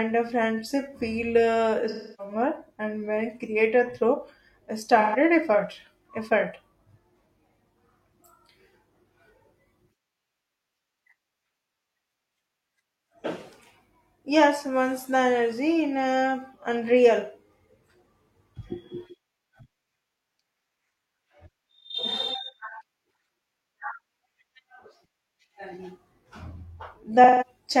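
A speech recording with three smeared, hollow patches: from 1.89 to 2.34 s, between "a friendship feel uh" and "and when created through", then 5.00 to 5.16 s and 27.24 to 27.47 s. This is AAC frame loss with concealment, where the decoder rebuilt missing frames from the previous spectrum.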